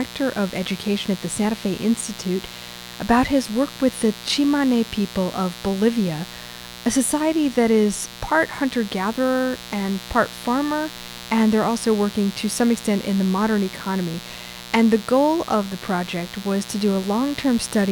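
Mains buzz runs throughout the speech, sitting roughly 15 dB below it. A dimmer, rectifier or missing shield let sharp switching spikes into the signal twice in every 60 Hz cycle, building harmonics up to several kHz that are heard as a steady, raspy buzz.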